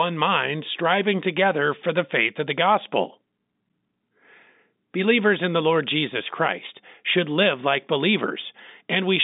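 No technical faults can be heard in this speech clip, which comes through a telephone line with nothing above about 3.8 kHz.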